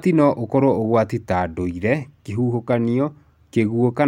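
No technical faults can be heard anywhere in this speech recording. There is nothing in the audio that calls for a fault description.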